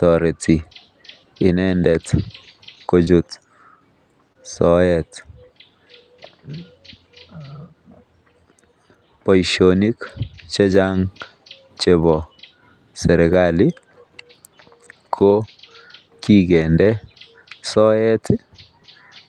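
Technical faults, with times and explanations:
2.53–3.09 s: repeated packet loss (robotic sound). Five separate holes open in this half second, the longest about 24 ms, and each is patched by extending the preceding sound, so about 71 ms, or 13% of the stretch, is synthetic fill. Because the patches recur close together, the sound turns choppy rather than simply clicking. That recurrence separates it from a single concealed loss, and the continued sound separates it from silent dropouts.
4.33 s: short concealed packet loss. One isolated hole, with about 20 ms of audio missing, consistent with a single 20 ms packet arriving too late. The receiver bridges it by carrying the last sound forward for about 22 ms and then blending back into the real signal. What you hear is a brief smear or wobble, not a gap. Unlike the run at 2.53 s, it happens once, so it reads as a momentary blur without any robotic texture.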